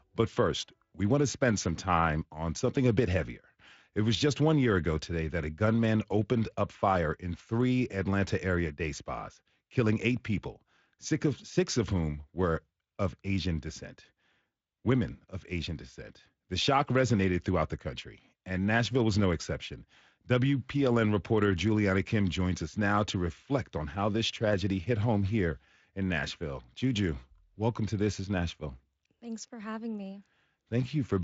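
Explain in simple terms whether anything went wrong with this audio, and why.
Nothing went wrong with this speech: it has been through the Speex codec at a setting generous enough that its effect is slight at most, and the sound simply stops short of the very highest treble, with nothing above 7.7 kHz.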